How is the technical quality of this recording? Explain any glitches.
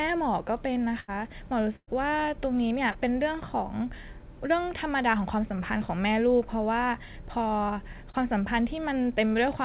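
The recording has four packet-loss glitches in a speech signal that comes through a narrowband call path, with nothing above 4 kHz, consistent with G.711 telephony coding.

Burst of packet loss occurs at 1.00 to 1.11 s and at 1.76 to 1.90 s. Consecutive packets failed to arrive in time, so the receiver extended the last audio and faded it down. The first event removes 80 ms, bridged by 79 ms of synthetic continuation. The second removes 120 ms, with 114 ms filled and a 50 ms stretch of silence. Each is heard as a held buzz or fading hiss before speech resumes slightly further on, with the intervening sound gone.

Short concealed packet loss occurs at 2.91 to 2.97 s and at 8.10 to 8.29 s. In each case 40 ms of audio missed the decoder deadline, and the receiver synthesized about 30 ms from the preceding pitch or noise shape before crossfading back into the real signal. The result is a brief smear or wobble, and a short consonant may be lost. 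The later event also stretches timing by roughly 10 ms.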